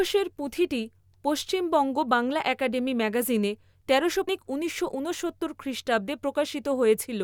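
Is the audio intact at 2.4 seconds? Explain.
Yes, the audio is intact at 2.4 seconds, with no audible fault at that point in the speech.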